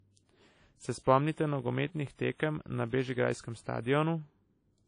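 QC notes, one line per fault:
Throughout: low-bitrate audio saved at a high bitrate. Nothing is present above 10.1 kHz, and the coding artefacts of a much lower-rate encode are audible. This likely comes from a low-rate source such as 32 kbit/s WMA re-encoded as high-rate MP3, which cannot restore the lost detail.
1.46–3.83 s: block size mismatch (padded). A steady 43.1 Hz buzz sits under the speech. Each block is slightly short and is topped up with zeros, which inserts a tiny gap at the block rate and fits a 1024-sample read size. The speech runs about 0.1% slow.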